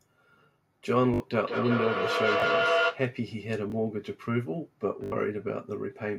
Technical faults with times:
1.14-1.20 repeated buffer
1.34-3.07 feedback echo between two devices
2.40-2.42 repeated buffer
3.70-3.72 repeated buffer
5.04-5.12 repeated buffer

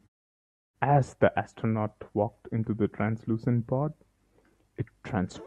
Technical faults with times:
none

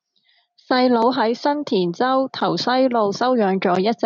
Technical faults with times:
none

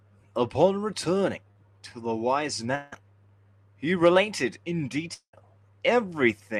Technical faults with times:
1.51-1.57 short concealed packet loss
2.75-2.94 long network dropout
5.14-5.35 long network dropout

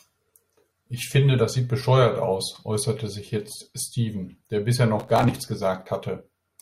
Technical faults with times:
5.00-5.47 processor overload crackle

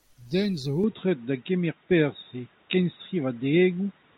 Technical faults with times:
0.84-4.17 input switched to a poorer device

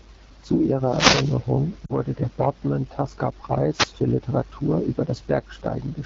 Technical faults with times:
0.00-6.06 AMR wideband (HD Voice) codec
0.74-1.48 wireless microphone noise hit
1.86-1.95 lost AMR speech frames
3.71-3.93 wireless microphone noise hit

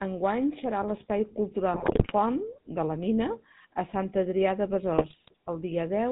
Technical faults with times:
0.00-6.12 GSM full-rate codec
1.74-2.12 GSM bit errors
4.92-5.32 GSM bit errors

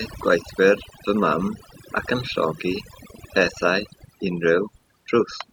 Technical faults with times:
0.00-5.52 overdone noise removal

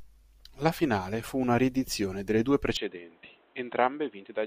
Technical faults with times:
2.77-4.46 input switched to a poorer device

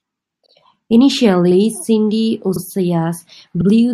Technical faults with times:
2.56-2.61 overlapping chunks
3.61-3.66 overlapping chunks

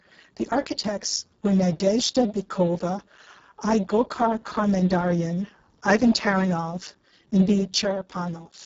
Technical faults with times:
0.00-8.66 Speex codec
0.69-1.02 one channel drops out
7.82-8.66 one channel drops out

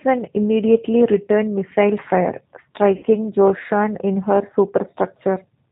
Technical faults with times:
0.00-5.71 G.729 codec
2.97-3.06 VoIP packet loss concealed by the speech codec

